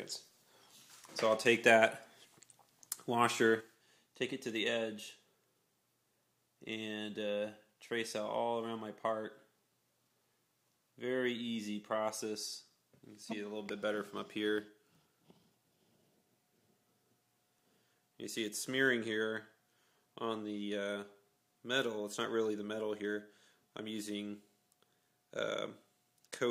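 At 3.61 s the level falls abruptly by about 6 dB and stays down until the end. This is one channel dropping out. One stereo channel was likely lost, so the mono sum keeps only half of the shared sound.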